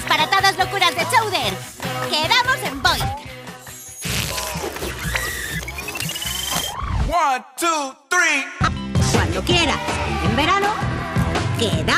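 From 3.02 to 5.46 s, and again from 8.55 s to the end, a Bluetooth SBC bit pool drop dulls the treble and adds gritty quantisation noise, which fits the bit pool falling from 31 to 15 (about 105 kbps). Unlike a plain low-pass filter, it adds grit, and clarity returns at 5.46 s when the rate recovers.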